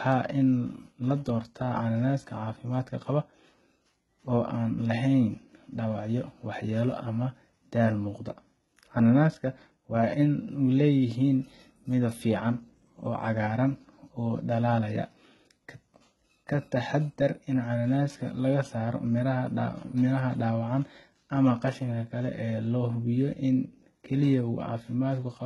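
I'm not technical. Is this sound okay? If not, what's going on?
No. The speech has HE-AAC compression damage across the whole clip, likely from heavy low-quality squeezing. The treble is rebuilt by copying lower sounds upward, so s sounds turn gritty and metallic. Nothing is heard above 11.8 kHz.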